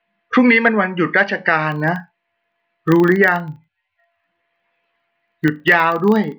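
From 1.68 s to the end of the speech, a filter restarted on every block. It loses its state at each block boundary and starts again from silence. Each restart leaves a small transient. These form a 25 Hz buzz, which fits 40 ms blocks, and the buzz rises and falls with the speech level.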